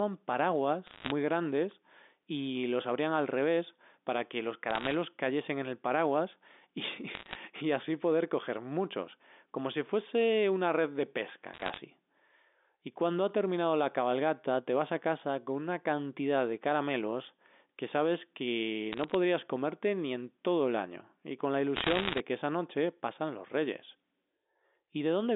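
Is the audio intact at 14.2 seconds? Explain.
Yes, the audio at 14.2 seconds is intact, with the speech carried cleanly through its G.711 telephone coding and its narrow line band of roughly 250 Hz to 3.6 kHz.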